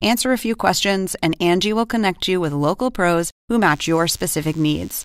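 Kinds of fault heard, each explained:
DECT cordless phone buzz: a nearby DECT handset or base station transmits radio bursts every 10 ms, and the audio circuitry rectifies them into a 100 Hz pulse. From about 3.6 s to the end, a thin, steady, harmonic-rich buzz sits well below the speech.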